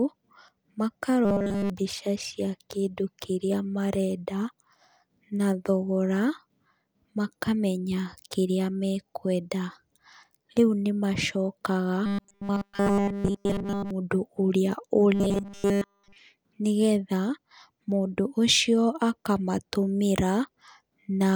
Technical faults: robotic sound from repeated short buffers

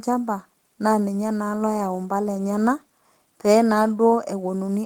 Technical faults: none

